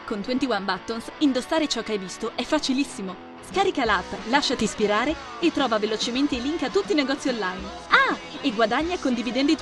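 No technical faults can be heard anywhere in this clip.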